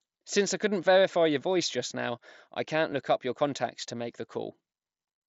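At 2.91 s, between "just now I can't" and "look up your contacts", there is a single concealed Bluetooth headset packet loss. One short stretch of the speech, about 7.5 ms, was lost between the headset and the phone, so the receiver filled the gap by repeating the best-matching slice of the waveform just before it. Because only one packet is involved, the patch is nearly inaudible. The mSBC wideband link carrying the audio keeps the speech band up to 8 kHz.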